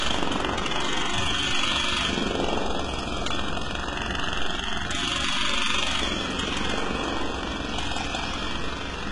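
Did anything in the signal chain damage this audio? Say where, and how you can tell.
Yes, at the codec stage, and it affects the whole clip. The treble is bright but falsely so: high content sounds gritty and metallic, its texture doesn't follow the detail below it, and nothing at all sits above 11.1 kHz. The likely cause is heavy HE-AAC compression, at a rate that points to something near 12 kbps. The codec transmits only the lower band and synthesises the top by copying lower bands upward under a coarse envelope, so harmonics fail to line up across the join. A plain low-pass or bandwidth-limited MP3 would sound dull instead of artificially sizzly.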